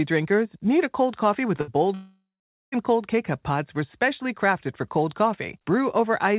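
At 1.61 s, just after "a cold coffee with", a burst of packet loss hits. The receiver extends the last sound for about 63 ms, and it fades away. About 60 ms of speech is skipped. Speech resumes at 1.70 s.

From 1.94 s to 2.75 s the speech breaks off. The last sound is held and fades. Then about 0.45 s of silence follows. When speech returns, around 0.78 s of it is missing. A long network dropout is the likely cause.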